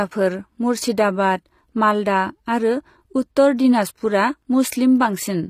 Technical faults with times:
0.00-5.49 HE-AAC compression

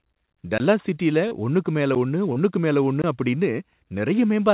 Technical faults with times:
0.58-0.60 block of digital silence
1.28-1.34 short concealed packet loss
1.95 block of digital silence
2.33-2.39 short concealed packet loss
3.02-3.04 block of digital silence

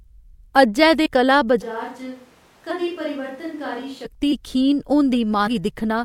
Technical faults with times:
1.05 compressed frames skipped
1.63-4.04 switch to a distant microphone
5.46 compressed frames skipped

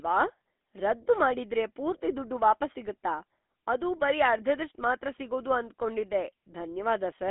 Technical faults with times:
0.00-7.30 GSM full-rate codec

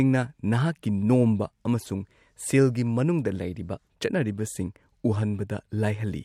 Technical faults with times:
0.15-6.22 clock slip clicks

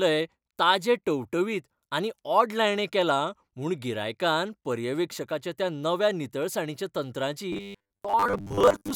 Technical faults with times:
7.53-8.95 robotic sound from repeated short buffers

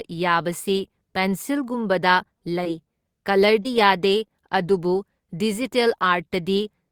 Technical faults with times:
3.63-3.67 short concealed packet loss

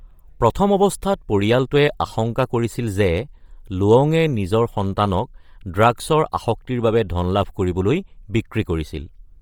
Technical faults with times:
0.00-9.42 Bluetooth LC3 compression

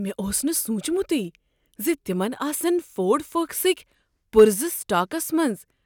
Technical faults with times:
none

